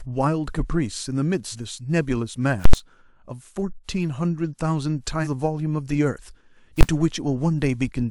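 At 1.51 to 1.56 s the speech lurches forward with an abrupt jump: compressed frames skipped. Roughly a fifth of a second is missing, which fits about four dropped frames of 46.4 ms. From 2.65 to 2.73 s a very loud pop opens and closes an 80 ms gap of nothing. This is invalid numbers at full scale, where a calculation produced infinite or invalid values that pinned the output at one extreme value. The same frame skip recurs at 5.23 to 5.27 s with the same jump ahead. At 6.81 to 6.83 s a single sharp bang marks a second full-scale block, only 20 ms long.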